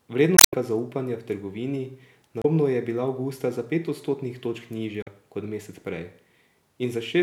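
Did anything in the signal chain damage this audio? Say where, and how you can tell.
Yes. The damage sits at the codec and storage stage: damaged data in a compressed stream. Three short disruptions break into the speech, at 0.36 to 0.54 s, at 2.40 to 2.45 s just before "je bila", and at 5.02 to 5.08 s right after "za pet odstotnih točk". At each one the decoder hit corrupted bytes, lost frame sync and produced garbage until it found the next valid header. What separates this from a network dropout is that the decoder was misreading bad bytes inside the stream rather than concealing packets that never arrived.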